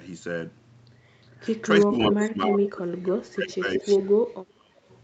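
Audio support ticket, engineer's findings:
Speech suppressed in double talk: speech level dips at 1.85–1.94 s, 2.1–3.85 s and 4.43–4.77 s, by roughly 20, 25 and 35 dB at deepest. Likely cause: echo canceller ducking near-end talker during far-end playback. Gain drop, not a packet-loss gap.

Echo leak: delayed copy of one voice returns at 1.96–2.24 s, 2.44–2.48 s, 3.66–4.07 s and 4.89–4.98 s, delay 360–377 ms, about 5 to 35 dB below speech. Likely cause: residual echo passing the canceller. A discrete, late repeat rather than room reverb. Opus band limit at 8 kHz is normal.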